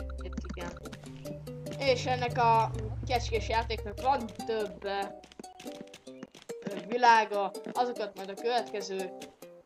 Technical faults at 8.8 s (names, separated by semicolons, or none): dropped samples